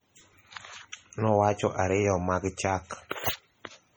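MP3 compression damage runs through the whole clip, from start to finish. Heavy coding artefacts are likely the cause: the encoder appears to have had too few bits, which fits a low bitrate around 32 kbps, so weaker frequency lines drop out and return from one frame to the next. The speech takes on a watery, swirling texture, sibilants turn metallic and chirpy, and consonant onsets smear. Content stops at about 20.3 kHz.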